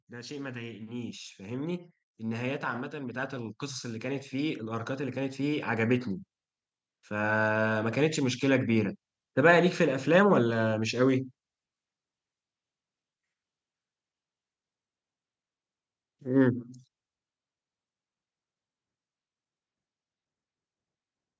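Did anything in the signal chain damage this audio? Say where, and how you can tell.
Yes: automatic gain rising in call processing. From 0.09 to 6.09 s, voice and background swell together by about 14 dB, gradually, unlike an abrupt level step.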